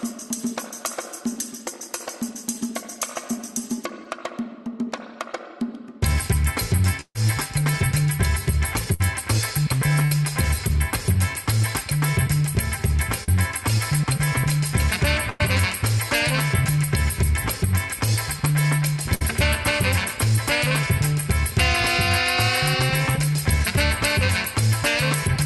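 At 4.04 s there's a short concealed packet loss. About 10 ms never arrived in time and the receiver patched it by continuing the last sound, so you hear a tiny smear. At 13.24 to 13.29 s a second one fills 40 ms, which comes across more as a brief wobble.

The bursts of packet loss are the bigger problem. From 7.01 to 7.16 s roughly 140 ms went missing. The decoder stretched the previous sound into a held buzz or hiss that fades, then goes silent for about 60 ms before the audio resumes further along. Shorter 60 ms bursts follow at 8.94 to 9.01 s and 10.05 to 10.12 s, each a smeared hold and then a skip. A 100 ms burst at 15.30 to 15.41 s and another 60 ms one at 19.15 to 19.22 s do the same, with the section underneath gone for good.

All of this sits on an Opus call path that's band-limited around 12 kHz.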